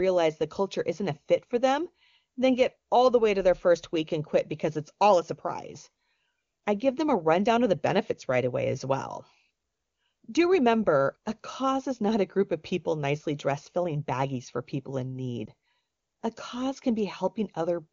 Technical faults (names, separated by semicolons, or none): lost AMR speech frames